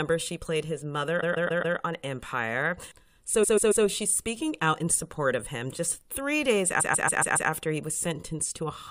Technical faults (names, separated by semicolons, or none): repeated frames